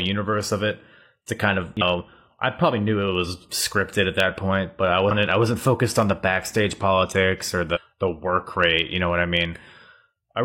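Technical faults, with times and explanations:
1.77–1.82 s, 5.07–5.12 s and 7.71–7.78 s, damaged data in a compressed stream: brief blips after "it to kind of", "that point but I" and "the backstage politics or", where corrupted bytes made the decoder misread frames and resynchronise.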